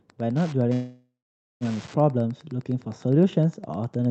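Right from the start there's Wi-Fi interference: a steady tick about ten times a second, matching a beacon every 102.4 ms. A nearby radio's bursts are being rectified in the audio circuit. It sits around 25 dB below the speech and is audible throughout.

Then from 0.73 to 1.64 s comes a call audio freeze. The last bit of sound is stretched into a fading buzz or hiss, followed by about half a second of silence. The speech then picks up exactly where it stopped, with nothing lost, just pushed about 0.88 s late. That's likely packets held up in transit and the jitter buffer running dry. The playback sits inside the Opus call path's roughly 8 kHz bandwidth.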